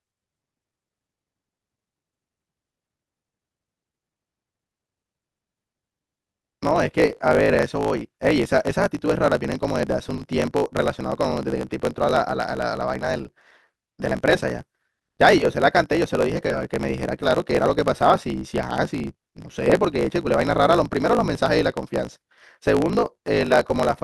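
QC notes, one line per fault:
Throughout, block size mismatch (truncated): one stage is writing longer blocks than the next one reads, and each block loses its tail. You get a steady buzz around 54 Hz and the speech runs about 1.16 times fast while keeping its pitch, which fits 1024-sample blocks being written.
7.28 to 7.50 s, repeated stalls (stutter): packets kept turning up late, so the jitter buffer ran dry three times in quick succession. The receiver stretched the last sound to cover about 90 ms in total, the longest wait 50 ms, so nothing's lost but it drags and stutters.
12.99 to 14.34 s, scattered short gaps: a few packets went missing here and there, roughly three, each no longer than about 20 ms, adding up to about 40 ms lost. Each hole got patched by carrying the last sound on, so it stays clear apart from little ticks or hiccups.
16.34 and 16.47 s, short concealed packet loss: two separate 20 ms chunks never reached the decoder in time. 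The receiver filled each by continuing the sound just before and then blended back, so you hear two brief smears or ticks, and a short consonant could drop out.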